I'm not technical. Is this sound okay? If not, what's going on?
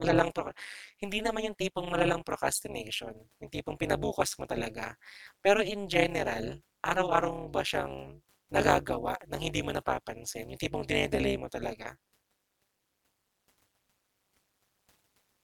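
No. Overlap-add ripple: the speech was chopped into short overlapping pieces and rejoined unevenly, so the loudness pulses about 200 times a second throughout, sounding buzzy and robotic.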